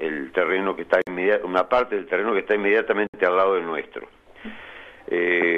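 Brief silences cut into continuous sound at 1.02 to 1.07 s (about 53 ms) and 3.07 to 3.14 s (about 67 ms), two seconds apart. These are gaps at a join of encoded pieces: leftover encoder delay and padding stayed in at the seams.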